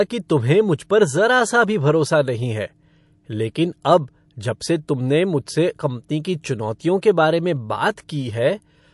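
MP3 compression runs throughout the speech, from start to finish. Nothing is heard above about 11.3 kHz, and the damage is plainly audible: sibilants turn watery and chirpy, and consonant onsets smear. This likely comes from an MP3 encoder short of bits, which fits a low bitrate near 48 kbps. It cuts the treble at a fixed frequency and drops weak spectral lines that flicker on and off from frame to frame.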